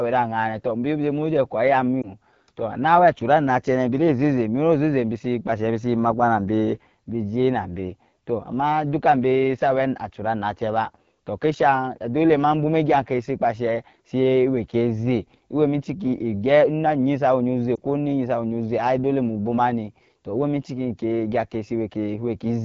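Throughout, the speech carries plainly audible AMR wideband (HD Voice) codec damage: a rough, raspy texture that points to one of the two lowest AMR-WB rates, around 8.85 kbit/s. A spectrogram shows smeared harmonics below 6.4 kHz and a shaped noise-like band from 6.4 to 7 kHz.

From 2.02 to 2.12 s and again from 17.75 to 17.79 s, lost AMR speech frames cause a brief dip or warble. Each fits a single missing 20 ms frame that the decoder patched with the previous frame's pitch and vocal tract settings at falling gain. In the waveform, the envelope sags briefly. In the spectrogram, the harmonics repeat and fade before normal detail returns.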